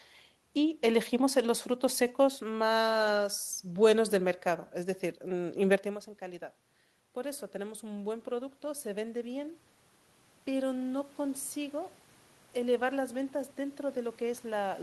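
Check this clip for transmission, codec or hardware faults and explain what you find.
There's one fault type here, automatic gain rising. From 7.13 to 9.63 s the input drops about 14 dB after the talker moves back around five and a half seconds. The AGC then slowly adds about 5 dB, so voice and room noise swell together. It happens again from 12.64 s to the end.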